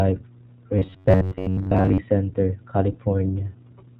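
It's a speech clip, and the whole thing has been through the iLBC codec, which fits a rate of around 15.2 kbps with 20 ms frames. You can hear the damage plainly: nothing above about 4 kHz makes it through, so it's dull and narrowband, and because each frame's excitation is coded on its own, the voice comes out a bit rough and synthetic. Then from 0.79 to 1.99 s there's robotic sound from repeated short buffers. The voice collapses into a stiff metallic buzz at 93.8 Hz that still loosely tracks the speech. That's likely the playback side running short of fresh audio and looping the last chunk, about 10.7 ms each time, which is where the fixed pitch comes from. During that stretch most of the real audio gets skipped in favour of repeats.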